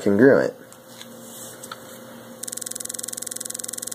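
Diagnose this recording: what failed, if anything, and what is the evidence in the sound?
A system hang loop at the driver or buffer stage: from 2.44 s to the end, one 46.44 ms slice repeats identically, a rough 21.5 Hz buzz that fits a frozen 2048-sample ring buffer. Unlike packet-loss concealment, the repeats never vary or fade.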